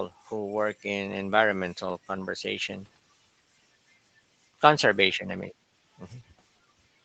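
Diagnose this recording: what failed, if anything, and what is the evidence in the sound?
Nothing failed: the speech carries the expected call-path character, with the microphone high-pass trimming the lowest bass and an Opus codec running at a bandwidth that stops at 8 kHz, and neither stage shows any fault.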